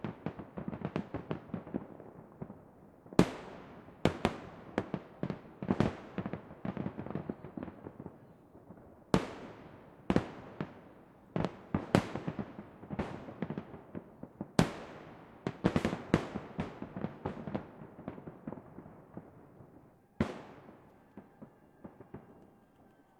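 No technical faults are audible.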